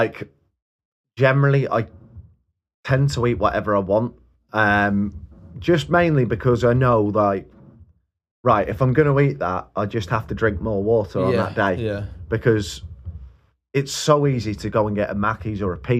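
No technical faults can be heard anywhere in this recording.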